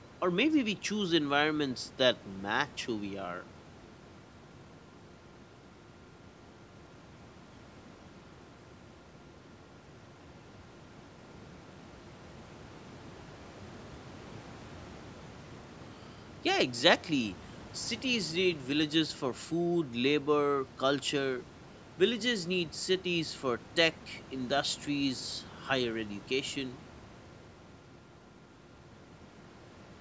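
No technical faults can be heard in the speech, which carries the usual signature of a call's microphone processing, with the lowest bass trimmed by its high-pass filter and nothing present above 8 kHz.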